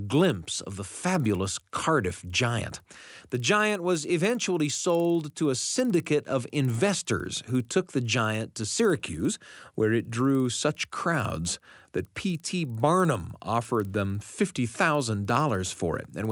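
From start to finish the speech carries a resampler restarted on every block. The sound was converted upward, which fits a 24 kHz to 48 kHz conversion, in separate 50 ms chunks, with the filter state reset at each boundary. Each edge is therefore interpolated against missing or wrong neighbouring samples, leaving a small discontinuity. These repeat at 20 Hz, heard as a steady low rasp or ticking under the speech that vanishes in the pauses.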